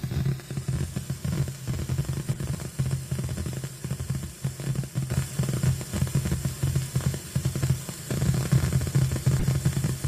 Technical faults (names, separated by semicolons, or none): corrupt frame decoded